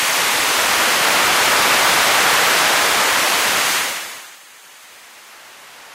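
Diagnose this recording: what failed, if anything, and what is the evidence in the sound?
Nothing failed; no faults heard.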